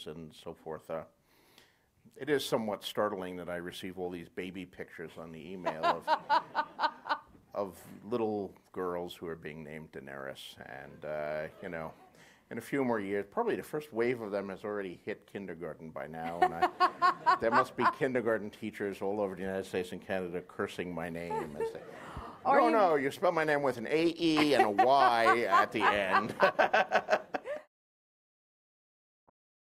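The audio has one corrupt frame decoded near the end, 29.28 to 29.30 s: a single damaged frame played anyway, giving a faint glitch around -50 dBFS, seen as a brief misplaced spectral smear.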